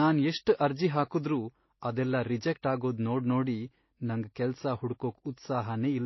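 Transcoding between lossy codecs runs through the whole of the speech, most likely a low-rate MP3 encode re-encoded as AAC-LC. Nothing survives above about 5.8 kHz, the cut-off that fits an MP3 near 24 kbit/s, so the speech sounds dull and muffled. The second encoder, at a rate that suggests around 32 kbit/s, spent its bits on the first codec's artefacts and added its own, so both kinds of distortion are heard together.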